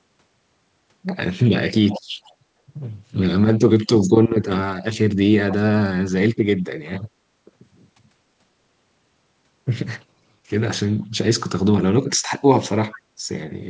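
Echo leak at 1.89 to 2.02 s, 2.24 to 2.34 s, 11.01 to 11.06 s and 12.91 to 13.0 s: brief delayed copies of the speech arrive 456 ms late, from about 15 dB below the talker down to about 40 dB below. The likely cause is a loudspeaker-side echo canceller letting residue back.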